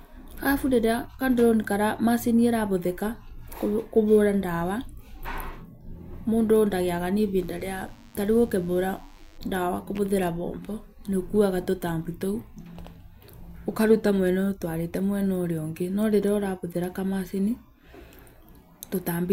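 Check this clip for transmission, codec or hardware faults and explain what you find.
A thin, steady buzz sits under the speech from 7.38 to 9.38 s, starting after "mũndũ ndagĩaga na" and gone by "ndawa kũhũthĩra moko nĩũkuaga". This is DECT cordless phone buzz: a nearby handset or base pulses radio bursts every 10 ms, and the audio circuitry rectifies them into a 100 Hz tone rich in harmonics. Here it stays faint, well below the speech.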